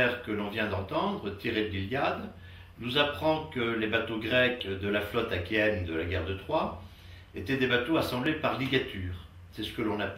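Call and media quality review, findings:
Clock drift buffer slips, likely from two devices on independent clocks, with a mismatch of a few hundred ppm. The buffer between them slowly fills or drains, then drops or repeats a block of a few tens of samples. Heard as regular clicks or pops, about seven, recurring every 1.83 s from 0.95 s to 10.09 s. Probable component: a capture or playout interface bridging two clock domains without resampling.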